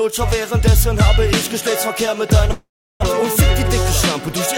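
At 2.51 to 3.04 s, a likely long network dropout: the last sound trails off as a fading buzz, then 350 ms of silence, and 400 ms is lost.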